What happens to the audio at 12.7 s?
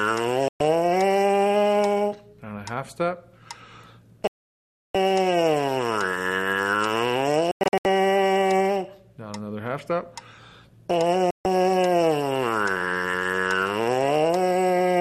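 Nothing goes wrong at 12.7 s; the audio runs through that moment intact, with no dropout, click or glitch.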